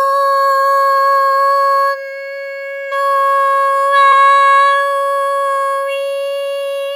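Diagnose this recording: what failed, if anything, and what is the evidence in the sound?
Codec stage: compressed frames skipped at 4.11 s, a jump where roughly 70 ms of audio vanishes, a few 23.2 ms frames missing or rejected at decode.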